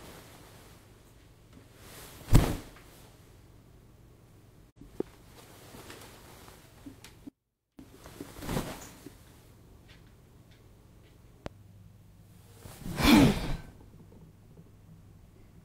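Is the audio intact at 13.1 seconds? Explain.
Yes, the audio is intact at 13.1 seconds, with no fault at that moment.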